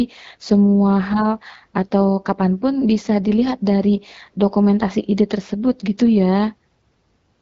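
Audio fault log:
No faults are present in this speech recording. The AMR wideband (HD Voice) path at 12.65 kbit/s is audible as a top end that stops near 7 kHz, with only light coding texture on the speech.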